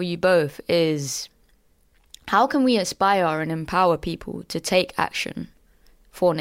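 No technical faults occur at any point in the recording, so there is nothing to describe in time order.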